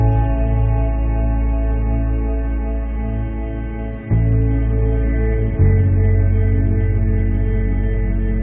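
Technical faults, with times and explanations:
Nothing here to flag: I didn't hear a single technical problem anywhere in this audio.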